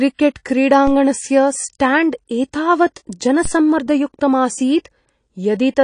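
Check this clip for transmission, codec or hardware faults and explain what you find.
The speech carries codec damage from start to finish, plus one low-frequency disturbance partway through.

AAC compression: Throughout the clip nothing is present above 9.8 kHz, and the speech sounds plainly dull and smeared, with a swirly, fizzy edge on sibilants. The likely cause is AAC-LC coding at a low rate, where the encoder drops the top band and quantises the remaining spectrum coarsely, which fits a rate of around 32 kbps. A simple low-pass filter would also remove the highs, but it would not add this warbling texture.

DC step: At 3.45 s the waveform's zero line jumps abruptly and then drifts back toward centre as a high-pass stage around 5 Hz bleeds the offset away. The result is a single low thump at that moment, while the speech continues with no gap or change in level. A dropout would interrupt the sound, and a digital click would be a sharp, bright tick rather than a dull low thump.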